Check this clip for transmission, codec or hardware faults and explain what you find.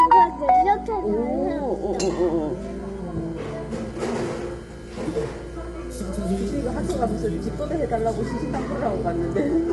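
One fault is present. Low-delay AAC compression runs throughout: likely AAC-ELD at a bitrate consistent with 32 kbps, whose coarse coding at this bitrate leaves plainly audible coding damage and nothing above 11.6 kHz.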